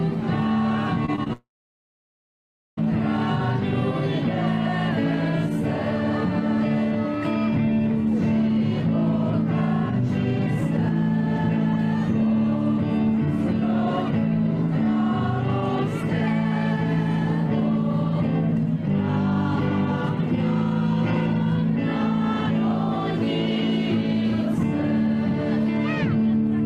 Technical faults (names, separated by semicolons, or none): repeated packet loss (robotic sound); long network dropout